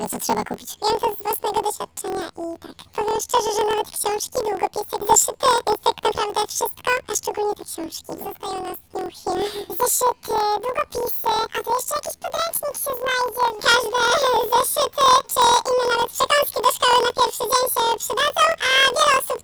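Planar audio read as interleaved, throughout: each 24 ms block plays twice at double speed, left then right, sounding an octave high with a 41.7 Hz flutter.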